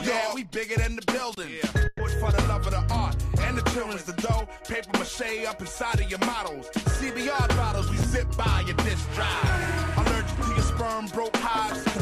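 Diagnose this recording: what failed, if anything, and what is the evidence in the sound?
Two hard dropouts to digital silence, a short hole from 1.35 to 1.37 s (about 23 ms) and a tick at 8.03 s (about 7 ms). These are blocks of digital silence at the driver or buffer stage, where output was not filled in time; the first fits a 1024-sample buffer.

From 1.87 to 2.02 s the sound smears into a held, fading continuation for about 120 ms, then resumes further along with that stretch missing. This is a burst of packet loss on the network path, concealed by the receiver extending the last sound.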